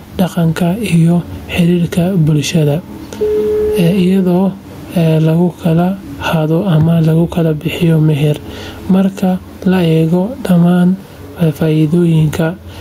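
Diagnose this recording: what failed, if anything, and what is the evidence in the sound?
Gain pumping runs through the whole of this speech recording. The room noise, about 36 dB below the speech, swells up in the pauses and ducks when the speech gets loud, a swing of around 10 dB. The likely cause is input gain set far too high, with a fast limiter or compressor in the call processing clamping each peak. A waveform shows loud and soft parts squashed closer in level, and a spectrogram shows the noise floor brightening between phrases.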